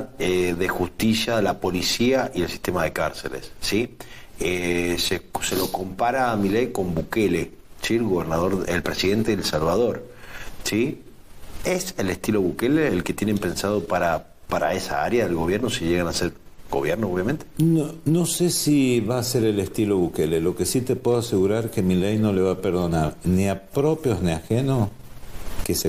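Nothing stood out on listening; no technical fault could be heard anywhere in the clip.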